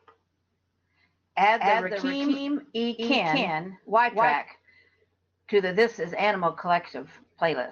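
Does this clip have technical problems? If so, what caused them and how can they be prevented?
Yes. From 1.60 to 4.36 s the speech is a doubled audio track. An equally loud dry copy trails by about a fifth of a second, then stops abruptly. Likely a second, slower capture path. Disable duplicate inputs or monitoring routes before recording.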